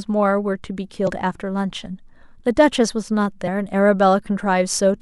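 At 1.03 to 1.08 s there's a short glitch from damaged data in the compressed stream: bad bytes make the decoder misread frames, lose sync and hunt for the next frame header. It happens again as a brief blip at 3.46 s.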